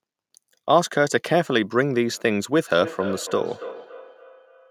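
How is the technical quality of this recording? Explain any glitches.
The recording has one clear fault, feedback echo between two devices, from 2.71 s to the end at 4.7 s. Another device on the same call replays this speech, this microphone captures it again, and the echo canceller misses it. The repeats come roughly every third of a second, peaking at about 14 dB below the speech. Unlike room reverberation, these are distinct copies at a fixed spacing, not a smooth decaying tail.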